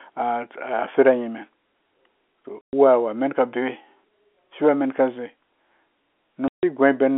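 A speech recording over a narrow telephone band is cut twice by abrupt dead gaps with hard edges: from 2.61 to 2.73 s (120 ms) and from 6.48 to 6.63 s (150 ms). This is packet loss filled with silence. Runs of packets never arrived, and the receiver inserted digital silence instead of concealing the loss. Both gap lengths are multiples of 30 ms, which fits a 30 ms packet.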